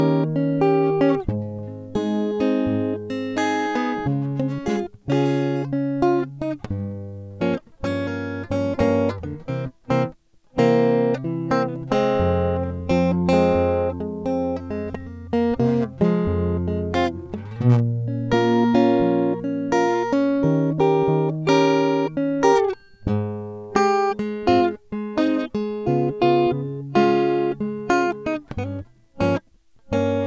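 Music, with no technical faults present anywhere in the clip.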